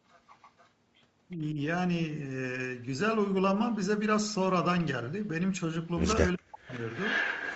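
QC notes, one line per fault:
0.08–0.7 s, 1.3–1.36 s and 6.74 s to the end, echo leak: the far side's echo canceller likely let its loudspeaker pickup through, returning a copy delayed by 378 ms. It is very faint in the first two spots but nearly as loud as the talker at the end.
1.36–1.58 s and 6.35–6.83 s, speech suppressed in double talk: with both sides talking, the canceller likely mistook the talker for echo and turned it down. The first dip is brief and shallow, roughly 10 dB. The second cuts out about half a second almost entirely.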